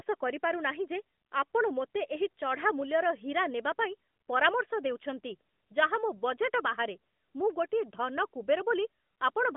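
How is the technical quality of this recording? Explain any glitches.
No glitches can be heard in this speech recording.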